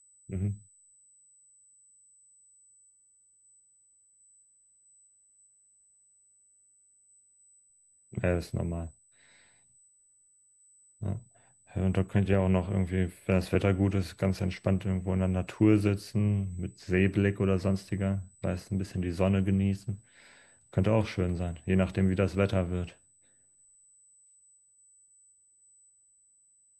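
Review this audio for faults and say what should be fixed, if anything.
A steady USB whine runs through the whole recording. It sits at a fixed 8 kHz, well above most of the speech energy. It is faint, roughly 35 dB below the speech. The tone matches the 125 microsecond microframe rate of a high-speed USB bus. Current drawn in those bursts is leaking into the audio through shared power or ground. The pitch never drifts. To prevent it, power the interface from a clean supply or isolate it with a ground-isolated USB hub.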